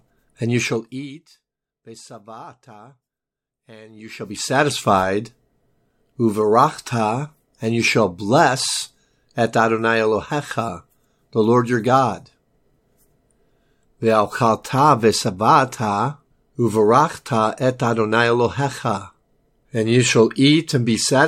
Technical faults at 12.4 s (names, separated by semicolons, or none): none